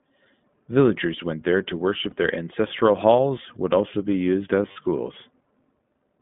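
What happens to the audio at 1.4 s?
At 1.4 s the speech carries the iLBC codec's narrowband coding, present throughout the clip. The audio is confined to roughly 150 Hz to 3.6 kHz, and independently coded excitation, consistent with 20 ms frames, gives plainly audible roughness and a synthetic edge.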